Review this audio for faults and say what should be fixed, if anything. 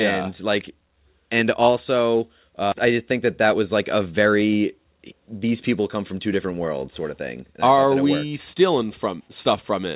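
A skip ahead occurs at 2.72–2.74 s, right after "like and also". About a second of speech is gone, and the two sides are butted together with no fill, so the phrase lurches forward mid-flow. The playout delay dropped by roughly the same second, which points to the jitter buffer discarding queued audio after it overflowed. A packet-loss gap would leave a silence or a concealment smear. Here nothing is inserted and the timeline simply jumps. Prevention: size the jitter buffer to absorb bursts and shed excess gradually instead of dropping a whole second at once.

Jitter buffer speed-up follows in two stretches. From 2.92 to 3.55 s, ending at "was like a", the speech runs at 106% speed and loses about 50 ms. From 3.99 to 6.28 s, ending just before "different worlds sort of", it runs at 110% and sheds about 300 ms. The receiver cut out short pitch-period chunks repeatedly to shrink a swollen buffer. 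Unlike a resampling speed-up, the pitch stays unchanged. Only the pacing turns hurried, with no chipmunk shift. Prevention: smooth packet delivery upstream so the buffer doesn't overfill and need compressing. The G.711 A-law call path's cutoff at 4 kHz is audible throughout as a narrowband telephone tone.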